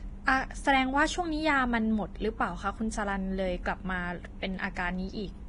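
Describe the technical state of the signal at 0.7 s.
At 0.7 s the speech carries the same damage heard across the whole clip, most likely Vorbis compression: nothing sounds above about 10.6 kHz, and the remaining treble is quantised so coarsely that detail turns to grainy hiss, blurring attacks, which fits a low bitrate near 30 kbps.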